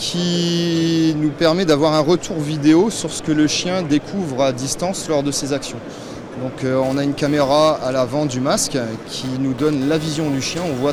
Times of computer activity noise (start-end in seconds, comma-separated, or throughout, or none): 6.82-10.92